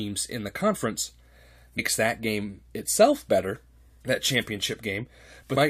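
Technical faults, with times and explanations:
1.78, 4.00 and 5.56 s: damaged data in a compressed stream. Each is brief, under 20 ms. Bad bytes in the compressed stream leave the decoder unable to parse those frames, so it briefly outputs garbage and then resyncs on the next good frame header.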